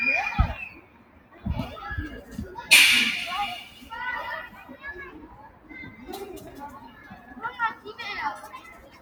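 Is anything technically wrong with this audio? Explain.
Yes. A noise suppressor applied to music or sounds runs throughout. A speech-tuned suppressor treats sustained tones and tails as noise, so the level swings by roughly 15 dB and the sound pumps, flutters or thins out.

Sound cut by the noise suppressor occurs at 0.7–1.45 s (about 10 dB down), 3.72–3.87 s (about 5 dB), 4.49–4.76 s (about 7 dB), 5.24–5.71 s (about 10 dB), 6.76–7.36 s (about 8 dB) and 8.56 s to the end (about 8 dB). Held or decaying sound sinks or is clipped short there.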